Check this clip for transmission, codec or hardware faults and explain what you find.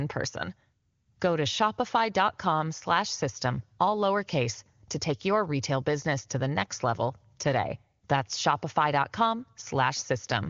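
No transmission, codec or hardware faults can be heard in this speech clip. It comes over an AMR wideband (HD Voice) link at a rate that fits 23.85 kbit/s, so nothing sits above about 7.1 kHz, and any coding damage is faint at most.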